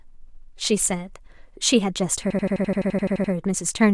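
From 2.30 s to 3.33 s a system hang loop occurs. The host stalled while the audio hardware kept replaying one ring-buffer segment. An 85 ms slice of speech repeats twelve times at 11.7 Hz, giving a machine-gun stutter that fits a 2048-sample buffer.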